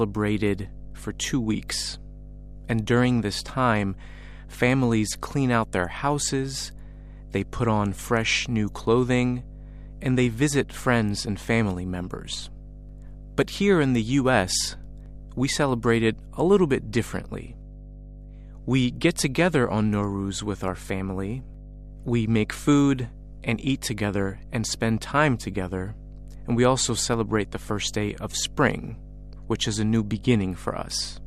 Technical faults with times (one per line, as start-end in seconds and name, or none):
0.00-31.27 mains hum